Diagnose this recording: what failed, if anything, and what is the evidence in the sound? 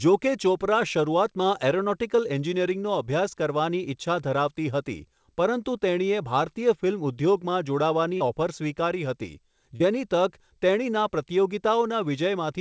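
Short concealed packet loss in the network stage: brief smears at 8.17–8.23 s and 9.76–9.83 s, each about 40 ms of audio missing. The receiver extended the preceding sound and blended back, so there is no silent gap or hard click as with a true dropout.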